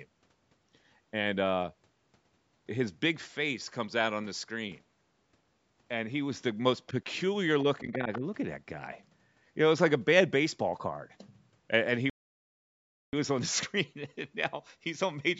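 Around 7.78 to 7.94 s you can hear the other side's voice leaking through, faint at about 20 dB under the talker, likely echo the canceller didn't fully remove from the loudspeaker pickup. Overlapping that, from 7.81 to 8.23 s, the talker's speech is suppressed in double talk: it dips by a few dB for roughly a third of a second, likely because the canceller couldn't separate the two voices and turned everything down. A second scrap of leaked echo comes through at 8.13 to 8.18 s, a bit louder, about 15 dB below the speech. Then at 12.10 s there's a playback stall, with the audio going silent for about a second until 13.13 s, likely the player running out of data before it picks back up.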